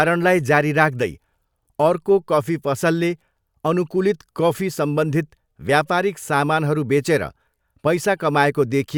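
No technical faults can be heard in the recording.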